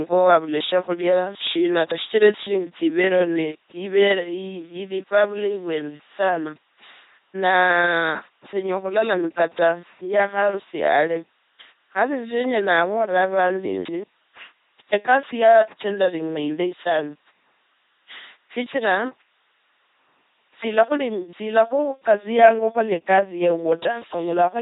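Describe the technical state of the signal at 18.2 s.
At 18.2 s the speech has the buzzing, mechanical robot quality of an LPC-10 vocoder, with no content above 3.8 kHz. This runs through the whole clip. The coder replaces the real voice with a simple source, either a pulse train or noise, fed through a short all-pole vocal tract filter. Each instant is forced to be fully voiced or fully unvoiced. The heavy degradation fits a 2.4 kbit/s stream.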